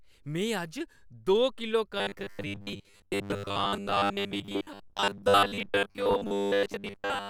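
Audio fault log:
1.98–7.29 s, robotic sound from repeated short buffers: right after "दो किलो" the speech becomes a rigid, metallic buzz locked near 100 Hz that still loosely tracks the syllables through to the end. The likely cause is audio arriving too seldom, so a roughly 10 ms slice gets replayed over most of this stretch while fresh audio is skipped. On a spectrogram this appears as evenly spaced horizontal harmonics at multiples of 100 Hz; the waveform shows near-identical 10 ms cycles repeating.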